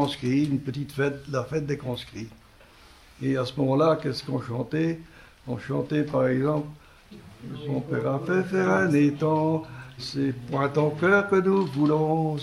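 Nothing is technically wrong with the clip; no fault can be heard anywhere in the audio.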